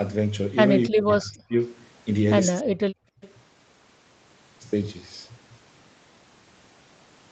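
This speech clip has two fault types, and in both an echo canceller was likely the cause. First, speech was suppressed in double talk: while both sides were talking, the canceller could not tell its own talker from the loudspeaker echo and pulled the level down. The voice sinks by around 30 dB, dipping from 0.89 to 1.56 s and again from 2.61 to 3.22 s, with roughly 0.7 s and 0.4 s of sound affected. Straight after, an echo leak lets a faint copy of the voice slip through from 3.21 to 3.33 s. It arrives about 0.29 s late, some 25 dB under the main voice, as a brief scrap. The audio, capped near 8 kHz, carries the coding texture of a call codec, consistent with a 32 kbps Opus stream.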